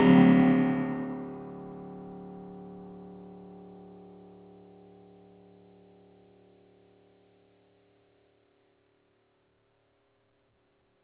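Throughout the music, a noise suppressor built for speech stays active. It treats sustained tones and tails as noise, cutting them by about 10 dB, so the sound pumps and thins. The call path stops at 4 kHz, which fits narrowband G.711 coding.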